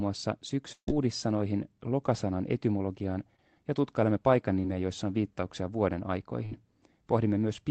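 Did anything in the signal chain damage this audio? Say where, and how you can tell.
Yes, there are two bursts of packet loss on the network side. At 0.72 to 0.88 s about 150 ms goes missing; the receiver stretches the last sound, fades it and leaves roughly 80 ms near-silent. At 6.45 to 6.52 s, after "joissa on viittauksia vuoden", 60 ms is patched the same way before the audio jumps ahead.

There are also two spots of short concealed packet loss, again from the network. At 3.36 to 3.39 s, after "lokasanan etymologiaan", about 20 ms never arrived, and at 4.60 to 4.64 s, after "etymologiaan ja tutkailemme paikan", about 30 ms. Each gap was filled by extrapolating the previous sound, which leaves a quick smear before the real audio blends back in.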